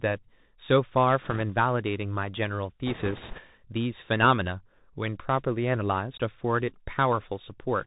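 The whole speech clip passes through a Bluetooth CVSD headset codec, consistent with a 64 kbit/s link. The spectrogram stops dead near 4 kHz, with granular hiss and scratchy sibilants. From 1.22 to 1.42 s and from 2.87 to 3.41 s, bit errors on the Bluetooth voice link, around 2 and 3 percent, add rushing crackle without loud clicks. The spectrogram shows a broadband noise haze below the cut-off rather than waveform spikes.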